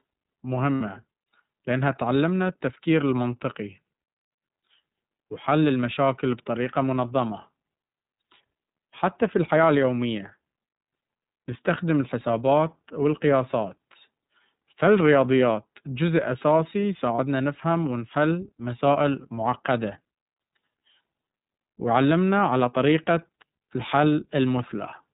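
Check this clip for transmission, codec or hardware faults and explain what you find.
Two faults are present: the whole clip of speech passes through the iLBC codec, and two short dropouts show lost iLBC frames.

iLBC codec, throughout: The speech was narrowband coded, so nothing above 4 kHz survives. Each 30 ms block is coded independently, which fits iLBC's 13.33 kbps mode. Rebuilding the excitation frame by frame with no reference to the previous one leaves the speech clearly muffled and a little rough, with a slightly synthetic edge.

Lost iLBC frames, 0.75–0.82 s and 17.16–17.19 s: Packets went missing, and the decoder filled each hole by repeating the last pitch cycle blended with noise. The first gap fits two lost 30 ms frames, the second, between "فالرياضيات جزء أساسي" and "نفهم ونحل مسائل معقدة", one. Each is heard as a brief held, buzzy-breathy vowel. The speech snaps back immediately afterward because the next frame decodes on its own.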